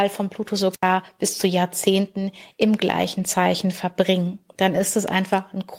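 At 0.57–0.59 s, just before "bis zu", a lost packet rebuilt from error correction: a 20 ms stretch decoded from a low-bitrate backup copy sounds briefly rough and noisy. On a spectrogram it shows as a smeared slice.

At 0.72–0.84 s, also just before "bis zu", a wireless microphone squelch dropout: the FM signal fades, hiss rises, and the receiver mutes for about 80 ms. The waveform shows a near-flat hole after a rise of noise.

At 3.19–3.21 s, the same error-correction rebuild recurs over 20 ms, again rough and noisy.

At 4.75–4.81 s, a longer 40 ms rebuild, which fits two lost packets. It sounds rough and noisy.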